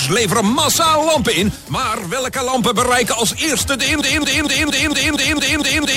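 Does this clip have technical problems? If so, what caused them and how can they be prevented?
Yes. A sudden gain jump at 1.56 s drops the sound and background together by about 5 dB. They return at 2.54 s. The cause is likely a gain change applied instantly, without a ramp. Apply gain changes with short fades.

A broken-record loop starts at 4.01 s. A 230 ms fragment repeats nine times to the end, replacing the audio that should follow. The likely cause is a stalled player or stream resending its last buffer. Add stall detection that outputs silence instead of repeating stale data.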